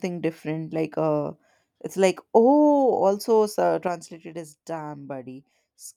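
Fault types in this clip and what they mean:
One channel drops out: from 3.88 s to the end the speech abruptly falls by about 6 dB and stays there. The likely cause is one stereo channel being lost, so after the mono sum only the surviving channel's half of the common content remains.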